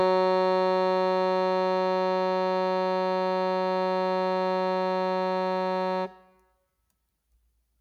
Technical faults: none

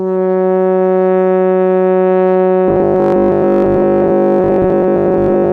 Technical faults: robotic sound from repeated short buffers

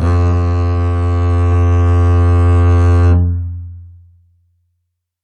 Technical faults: compressed frames skipped

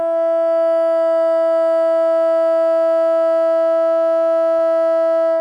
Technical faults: short concealed packet loss

